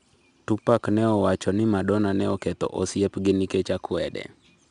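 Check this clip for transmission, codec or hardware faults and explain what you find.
One codec fault runs through the whole clip. 4-bit ADPCM compression is present from start to finish. Each speech sample is coded as a coarse 4-bit step from a predicted value, with the step size adapting as the signal moves. The resulting quantisation noise rides on the speech's level, so every loud syllable carries a plainly audible gritty hiss, and sharp onsets roughen where the step lags behind. Nothing reaches above about 10.6 kHz, which dulls the top end and points to a reduced sample rate.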